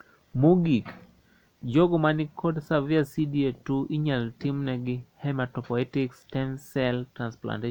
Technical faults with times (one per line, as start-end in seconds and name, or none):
none